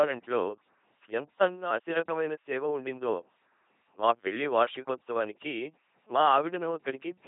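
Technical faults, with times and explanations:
Throughout, LPC-10 vocoder: the speech turns buzzy and robotic, since each moment is rebuilt from a ten-pole filter fed by pulses or noise, never a mix. Nothing remains above 3.7 kHz. Unlike plain band-limiting, the voice's natural texture is replaced, fitting heavy 2.4 kbit/s coding.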